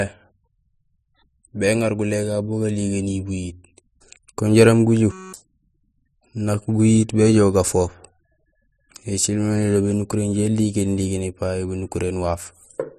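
At 5.12 s the speech gives way to a system hang loop lasting until 5.33 s. The computer or driver stalled while the sound hardware kept replaying its ring buffer, so one 5.33 ms slice repeats 39 times, which fits a 256-sample buffer. Looping that fast produces a steady, pitched buzz at 188 Hz rather than a stutter. Unlike a plain dropout, the gap is filled with this tone, and about 200 ms of speech is lost.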